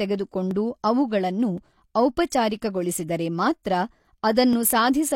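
Single sharp clicks cut through the speech at 0.51 s, 1.58 s and 4.53 s, each a thin instant tick. These are likely dropped samples: under a millisecond of audio goes missing, so the waveform jumps abruptly to a later value without removing any audible sound.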